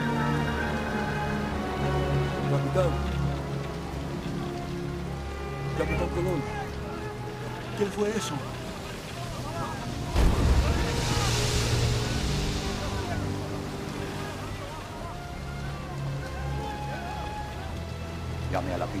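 No technical faults can be heard anywhere in the audio. Nothing in the recording or playback chain draws attention to itself at any point.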